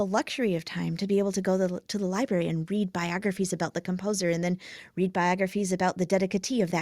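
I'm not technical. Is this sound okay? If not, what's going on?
Yes, no technical faults are audible anywhere in this speech recording.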